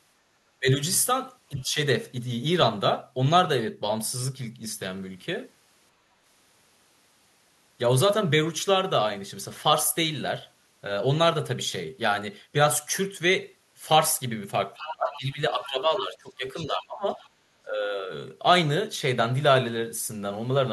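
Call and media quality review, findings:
Speech suppressed in double talk at 0.60–0.79, 1.49–1.77, 14.75–17.19 and 17.65–18.10 s. Level dips up to about 20 dB. Likely the echo canceller ducking the near talker while the far end speaks.

Other side's voice leaking through at 1.59–1.63 (faint), 14.74–15.17, 15.60–15.67 and 16.56–16.84 s. Loudest near 15 s, about 10 dB under speech. Likely residual loudspeaker echo left uncancelled.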